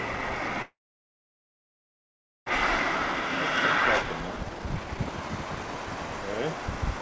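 From 0.62 to 2.52 s the sound breaks off. A brief decaying buzz continues the last sound, then most of the gap is silence. When the audio resumes, about a second of it is gone for good. This is likely a long network dropout. No packets reached the receiver, so it filled the hole with concealment and then stopped. The stream picks up later in time, skipping the missing part.

From 4.04 to 7.00 s the audio runs fast, at about 123% speed, with the pitch unchanged. At this rate it sounds clearly hurried. This is a jitter buffer speed-up. After the gap, the buffer held far more audio than its target. To shrink that backlog, the receiver cut out many short pitch-period pieces in a row. Roughly 0.7 s was removed this way. Throughout the clip, the band stops at 8 kHz, which fits a G.722 call codec.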